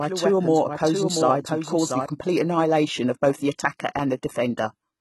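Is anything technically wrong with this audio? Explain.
Yes, there are two faults.

Throughout the clip, the speech has a gritty, metallic top end, and nothing at all sits above 11.8 kHz. This fits HE-AAC compression, likely at a very low bitrate, around 16 kbps. The codec keeps only the lower spectrum and synthesises the treble by copying lower bands upward under a coarse envelope. The rebuilt harmonics don't line up with the real ones, so sibilants sound lispy and smeared, and the damage is heavy.

From the start to 2.06 s there is a doubled audio track. It is already under way when the clip opens. A second, full-band copy of the same speech trails the original by roughly 0.7 s, about 5 dB quieter, and has no added decay or room colour. It is likely caused by a second, slower capture path or by an edit that left two copies out of step. The copy cuts off abruptly at 2.06 s, just before "annihilation of".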